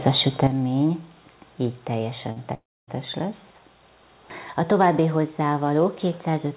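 At 0.47 s the whole audio, background noise included, drops abruptly by about 9 dB and stays lower to the end, with no fade. That is most likely a sudden gain jump, a digital gain change applied between one sample and the next rather than ramped. At 2.32 s a brief smear of about 40 ms briefly wobbles the sound. This is short concealed packet loss: that slice never reached the decoder in time, so the receiver extended the preceding sound to cover the gap and then blended back into the real signal. From 2.54 s to 2.89 s the sound smears into a fading continuation and then falls to near silence for roughly a quarter of a second before resuming further on, with that stretch missing. This is likely a long network dropout: audio stopped arriving for about 0.34 s and concealment could only hold the last sound briefly. Everything came over a call path with G.711 A-law coding at 64 kbps, which is why nothing above 4 kHz is present.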